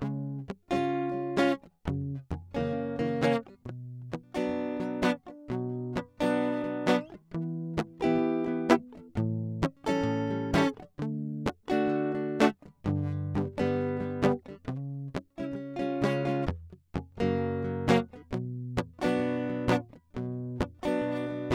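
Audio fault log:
No faults in the music.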